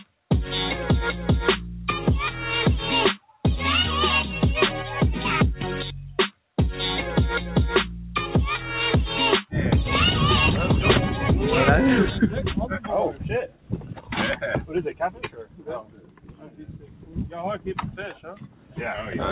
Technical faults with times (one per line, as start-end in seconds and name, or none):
0.00-19.32 noise suppressor applied to music or sounds
13.12-14.14 sound cut by the noise suppressor
14.89-17.34 sound cut by the noise suppressor
17.87-18.78 sound cut by the noise suppressor